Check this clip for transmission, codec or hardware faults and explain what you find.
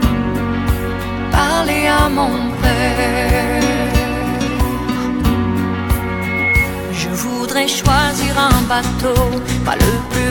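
One fault stands out: a loudspeaker feedback squeal from 6.03 to 6.73 s. A microphone is hearing the loudspeaker it drives, and around 2.2 kHz the round trip through mic, amplifier and speaker returns more energy than it started with, so that frequency reinforces itself on each pass. It swells over about half a second into a piercing single tone roughly 5 dB above the rest of the sound, then stops at 6.73 s.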